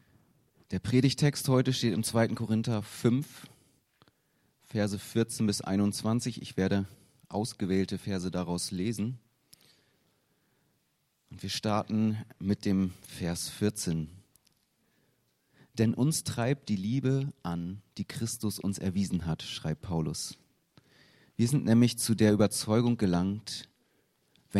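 Nothing stood out as a technical fault on listening.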